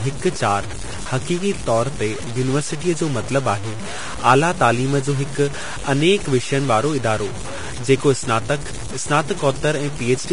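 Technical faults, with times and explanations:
Throughout, low bit depth without dither: the speech carries a gritty, grainy distortion that rides along with the signal and sits only around 15 dB below it, so quiet stretches turn rough rather than clean. This likely comes from truncating the samples to very few levels, which fits about 5 bits, with no dither added. Because the rounding error is tied to the waveform, it follows the speech as distortion instead of forming a separate, steady noise floor.
Throughout, Vorbis compression: the speech shows heavy codec damage, with nothing above 10.6 kHz, a hissy, grainy treble and blurred, roughened sound. The likely cause is low-quality Vorbis encoding, which fits a bitrate around 32 kbps. At that rate the encoder cuts the top of the spectrum and quantises the remaining high-frequency detail so coarsely that it is replaced by noise of similar energy, which gives the smeared, noisy texture.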